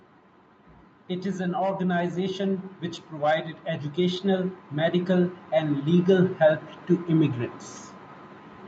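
From 1.09 s to 7.42 s the speech and the room noise behind it swell together, climbing steadily by about 11 dB over more than six seconds, so the talker seems to edge closer while the background rises in step. This is automatic gain rising: the call's gain control judged the input too quiet and kept pushing its gain up gradually, lifting everything equally. The audio stays band-limited to 8 kHz, as expected through this call path.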